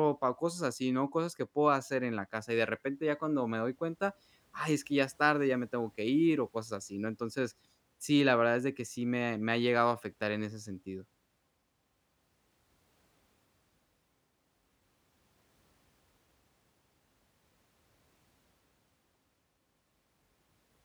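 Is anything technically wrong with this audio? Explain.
No, nothing technically wrong can be heard here.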